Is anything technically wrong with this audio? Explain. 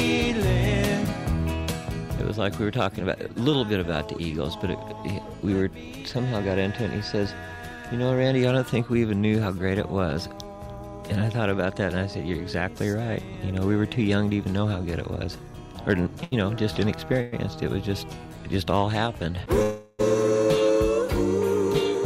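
Yes, there are three timing faults near the end of the clip. In each one the audio stops advancing, a filler sound takes its place, and the audio then resumes where it stopped.

From 16.23 to 16.34 s there is a short stall from a late packet. A packet arrived after its playout time, so the jitter buffer emptied, and the receiver stretched the last sound for about 82 ms until the packet came. Nothing is lost, but that sound is held too long with a faint buzz or dip. On a spectrogram the preceding harmonics continue as flat horizontal bands. The waveform shows a repeating periodic stretch where the natural variation should be.

At 17.21 to 17.34 s and again at 19.62 to 20.01 s there is a call audio freeze, likely caused by packets held up in the network that left the jitter buffer empty. The receiver continued the last sound as a fading buzz or hiss, filling about 108 ms and then about 367 ms, and never dropped to silence. 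Afterwards the audio picks up without loss, running later than before. A spectrogram shows smeared, steadily decaying bands and then an abrupt return to normal detail.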